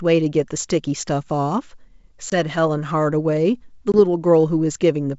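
At 2.30 s and again at 3.92 s the speech drops into a hard-edged gap of about 20 ms each, consistent with a single lost packet, the classic signature of packet loss on an ADPCM call. The decoder fills the hole with silence, but its adaptive predictor and step size no longer match the sender's, so the speech resumes with brief distortion. This settles by 2.37 s and 3.94 s. The wideband G.722 coding itself stays clean.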